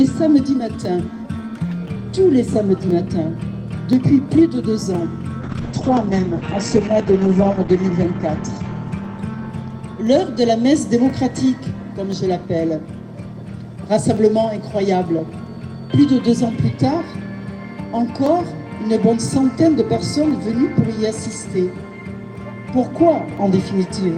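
From 0.85 s to the end, a tick sounds every 1.02 s. These are periodic USB or driver dropouts. Something blocks the audio path on a fixed schedule. Each time, a tiny slice of audio is skipped outright rather than filled with silence. The sound jumps forward and leaves a click at the join. The ticks are perfectly regular, which points to a background task, not to the content.

From 5.45 s to 10.57 s comes a call bitrate drop. The encoder has been told to spend far fewer bits. The sound turns coarse and watery. The top end also disappears, as the bandwidth narrows from 20 kHz to 8 kHz. That dullness fits a fall from about 32 kbps to about 9 kbps. The worst stretch lasts about 2 s. Then the bitrate recovers and the highs return.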